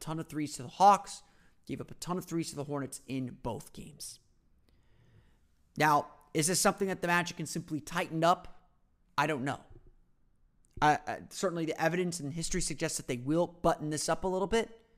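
From 8.23 s to 12.93 s the speech shows crude rate conversion. The error pattern points to a 3:2 upsampling, consistent with 32 kHz to 48 kHz, done by linear interpolation between neighbouring samples with no anti-imaging filter. The straight-line interpolation leaves mirrored, inharmonic copies of the signal, roughly 25 dB below it, heard as a gritty fizz that follows the louder and brighter parts of the speech through that stretch.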